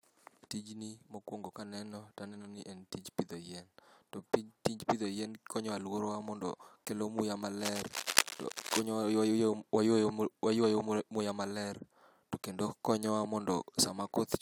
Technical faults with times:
7.59-8.86 cable scratch noise

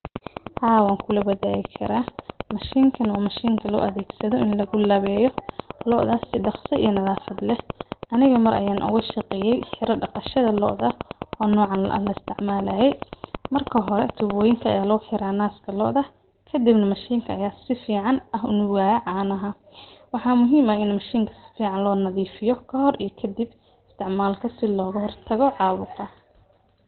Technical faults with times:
0.00-26.87 Opus compression

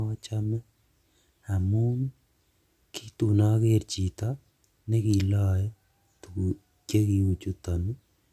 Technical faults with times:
none

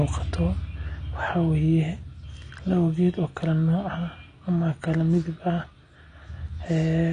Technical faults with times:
0.00-7.13 AAC compression

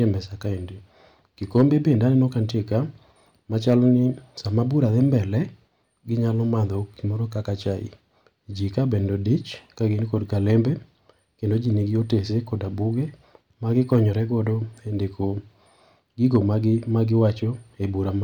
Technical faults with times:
1.56-1.91 hard clipping
3.68-3.89 hard clipping
13.92-13.96 hard clipping
16.35 hard clipping

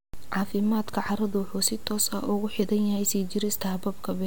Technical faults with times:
none

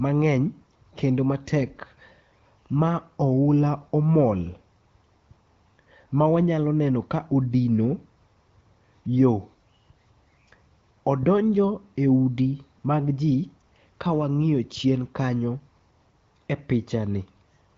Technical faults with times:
none

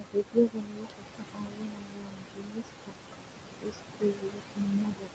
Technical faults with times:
0.00-5.14 noise suppressor artifacts
0.00-2.96 speech cut by the noise suppressor
3.44-5.14 speech cut by the noise suppressor

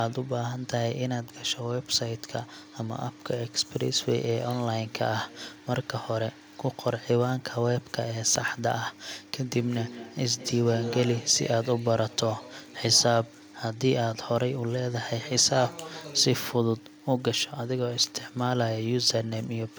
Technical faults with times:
9.36-11.46 feedback echo between two devices

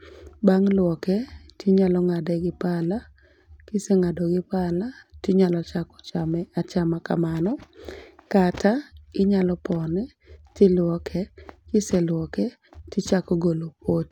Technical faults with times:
none

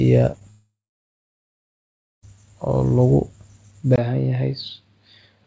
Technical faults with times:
0.32-0.42 short concealed packet loss
0.50-2.24 long network dropout
3.96-5.47 input switched to a poorer device

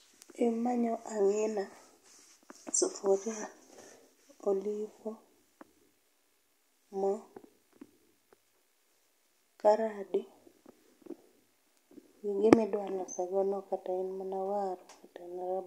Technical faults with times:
none

